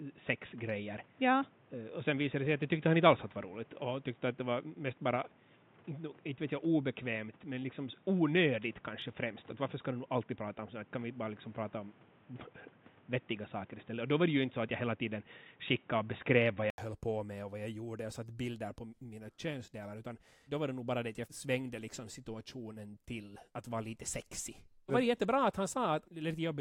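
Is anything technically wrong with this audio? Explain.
Yes. From 0.0 to 16.78 s, the speech is band-limited at 3.8 kHz, dull and boxy, with added noise. It is likely an input switched to a poorer device. At 16.78 s, an 80 ms gap precedes "höll på med och". The sound then clears up and shifts in level by roughly 5 dB.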